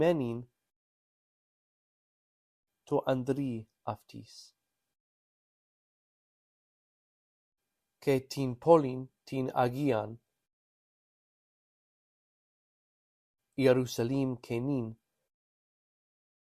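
From 12.61 to 13.41 s, a steady buzz at about 46.9 Hz rides over the sound while the pitch and pace stay essentially unchanged, at 1.0 times normal speed. This is a truncated block size mismatch: one stage hands over longer blocks than the next one takes in, so the tail of each block is discarded. Those regular cuts create the buzz, and its rate fits 1024-sample blocks at 48 kHz.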